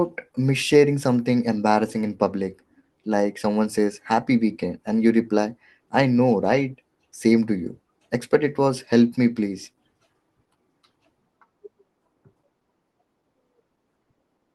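Speech carried over a WebRTC call path with an Opus-style band limit near 12 kHz, and no technical faults anywhere in the clip.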